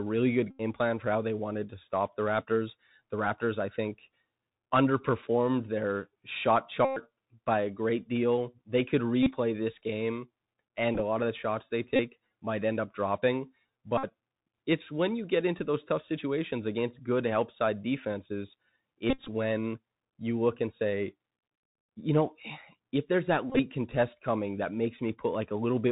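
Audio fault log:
Throughout: Bluetooth CVSD headset codec. The sound is narrowband, with nothing above 4 kHz, and the CVSD damage is plainly audible. Each sample is coded as a single up-or-down bit at 64 kHz with an adapting step, so fast loud high-frequency movements outrun the step and distort. Sibilants come out scratchy, and a granular hiss from the constant step-hunting sits under the speech.
0.51–0.61, 6.85–6.99, 9.23–9.33, 10.95–11.01, 11.96–12.00, 13.98–14.05, 19.10–19.28, 23.50–23.60 s: Bluetooth headset packet repeated. Lost headset packets were replaced by re-decoding the previous packet's bits, about 26 to 135 ms of audio per event. Continuous runs repeat every 3.75 ms, producing a steady buzz near 267 Hz, longest at 6.85 s (about 116 ms). At 10.95, 19.10 and 23.50 s the losses are scattered, so the buzz breaks into bursts, the longest roughly 50 ms.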